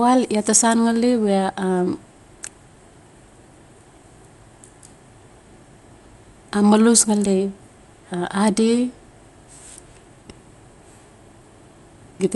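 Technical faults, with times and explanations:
Throughout, Dolby Digital compression: the speech sounds dull, with nothing above 11.5 kHz and a rough flutter from noise-filled bands, likely a starved 64 kbps encode.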